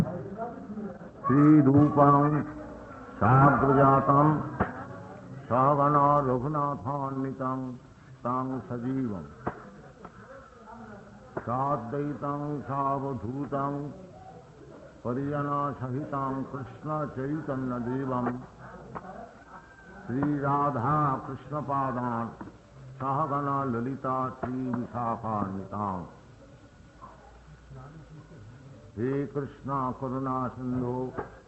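No technical faults are audible.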